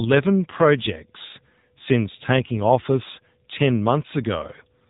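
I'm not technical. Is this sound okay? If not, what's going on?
No. Throughout the speech it sounds like an old mobile phone call: thin and muffled, with a buzzy, artificial edge. That is the AMR narrowband mobile codec, which discards everything above 4 kHz and rebuilds the voice from a simplified model, squeezed hard enough to hear.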